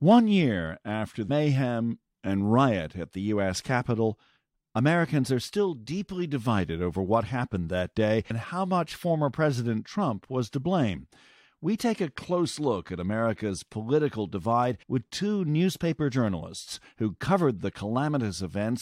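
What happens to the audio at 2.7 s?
Nothing goes wrong at 2.7 s; the speech runs on cleanly through that moment with no dropout, click or distortion.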